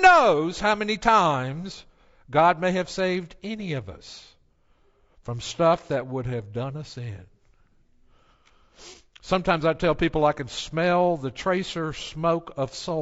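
From start to finish, the speech sounds rough and grainy. Noise fills the gaps between the pitch harmonics. The top band sounds thin and somewhat synthetic. This points to low-delay AAC compression, likely AAC-ELD of the kind used in video calls. Its short frames cannot separate closely spaced harmonics well. They also use up bits quickly. At a rate that fits about 32 kbps, too little is left for a clean signal, so the damage is plainly audible.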